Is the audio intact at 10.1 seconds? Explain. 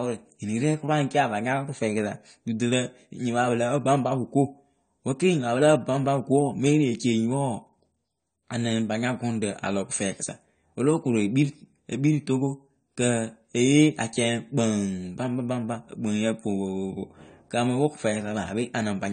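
No. At 10.1 seconds, as throughout the recording, the speech sounds dull and smeared, with a fizzy, warbling edge on sibilants and nothing above 9 kHz. This is most likely AAC compression. The AAC-LC encoder has kept too few bits for each frame's spectrum, so it drops the top band entirely and quantises what remains coarsely, leaving gaps that shimmer. That degree of damage fits a bitrate of about 32 kbps.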